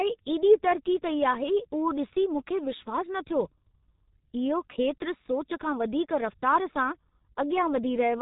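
A speech clip that has passed through the G.723.1 codec for its whole length. The sound is muffled and hoarse with smeared consonants, which points to a bitrate near 6 kbit/s. On a spectrogram, energy stops sharply at 3.8 kHz, and harmonics look coarse and blocky over time.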